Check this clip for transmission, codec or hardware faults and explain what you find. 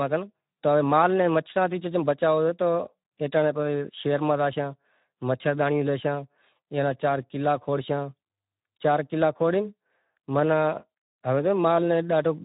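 One fault runs through the whole recording: Speex codec damage, plainly audible from start to finish. Speex is a CELP coder, and at a low setting it has little budget left to describe the excitation, so the speech comes out hoarse and grainy. The harshness points to a low bitrate, roughly 11 kbps. On a spectrogram nothing appears above 3.8 kHz, and the harmonics below that look smeared and noisy rather than cleanly striated.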